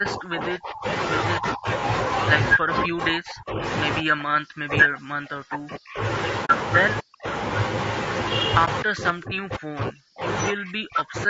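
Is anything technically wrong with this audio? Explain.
Yes. Low-delay AAC compression runs through the whole clip, likely AAC-ELD at about 32 kbps. Its short frames resolve pitch harmonics poorly. The speech sounds rough and grainy, with noise filling the gaps between harmonics and a thin, synthetic-sounding top end.

Speech suppressed in double talk occurs at 0.0–0.86 s, 1.36–1.67 s, 2.55–3.63 s, 4.01–6.01 s, 7.0–7.27 s, 8.83–10.27 s and 10.5–11.29 s. It is likely caused by an echo canceller that could not tell the talker from loudspeaker echo while both sides spoke, so it turned everything down. The voice sinks by up to about 40 dB.

AAC frame loss with muting hits at 6.45–6.5 s and 8.65–8.68 s, roughly 40 ms and 20 ms. The decoder zeroed the lost frames, and the overlapping windows fade the sound out and back in. The result is a soft-edged hole at 6.45 s and a brief dip at 8.65 s.

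The call microphone processing's high-pass filter trims the lowest bass, and nothing is heard above 8 kHz.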